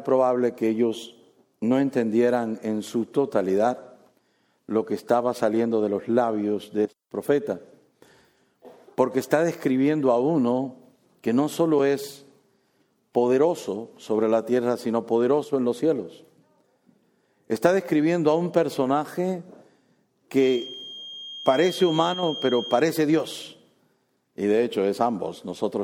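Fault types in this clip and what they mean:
Feedback whistle: a thin, steady tone at 3.2 kHz sits behind the sound from 20.34 to 22.87 s, roughly 15 dB below the main signal and swelling and fading slowly in level for about two and a half seconds before it stops. The likely cause is a loudspeaker feeding back into the microphone with loop gain just short of runaway, so that one frequency keeps ringing at a low level instead of building into a howl.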